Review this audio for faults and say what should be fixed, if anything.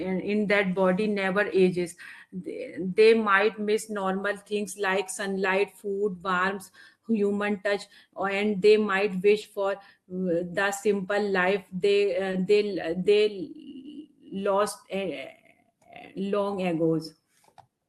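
Lost packet rebuilt from error correction: single packets went missing at 0.41–0.43 s, 4.15 s, 9.43–9.45 s, 12.33–12.35 s and 13.85 s. Each time, the next packet's low-bitrate backup copy filled the 20 ms, so there is no gap, only a brief rougher, noisier patch.

Short concealed packet loss: at 9.41–9.45 s and 12.31–12.35 s, a 20 ms stretch arrived too late for the decoder. The receiver extrapolated the preceding sound to fill the gap, then handed over to the error-correction copy. The result is a quick smear or wobble.

A larger jitter buffer and a more stable network path would let these packets arrive on time instead of being rebuilt or guessed.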